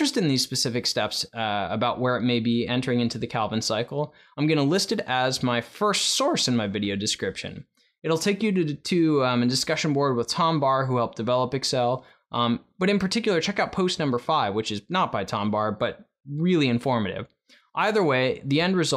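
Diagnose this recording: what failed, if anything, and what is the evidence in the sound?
Hard clipping at the converter or sample-format stage, 17.81–17.84 s: peaks just reach full scale, only about 0 dB over, giving a brief crackle. The waveform shows flat-topped peaks, and the spectrogram a faint broadband vertical streak.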